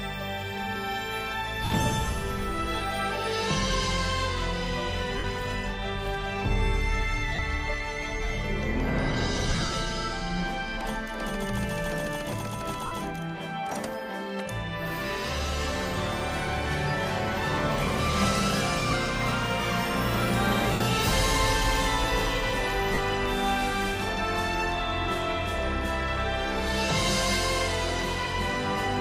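Lost LE Audio frames break up the audio at 1.65, 5.18, 7.35, 12.86, 18.90, 20.73 and 22.94 s, each gap 22 to 75 ms long, plus a 240 ms stretch from 9.50 s holding about 150 ms of scattered losses. The LC3 decoder fills each gap with recycled, sign-randomised spectrum, so tones smear into noise.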